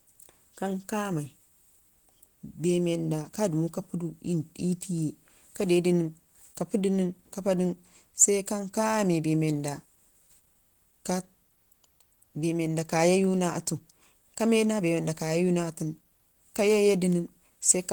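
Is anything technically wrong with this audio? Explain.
Yes. Throughout the speech there is plainly audible damage, most likely from Opus compression. The encoder appears to be in its hybrid speech mode at a rate that fits about 16 kbps. Bands are filled with folded or noise-like content rather than left empty, so the sound turns muffled, hoarse and grainy. It swirls less than MP3, and the treble still extends to about 20.1 kHz instead of being cut off low.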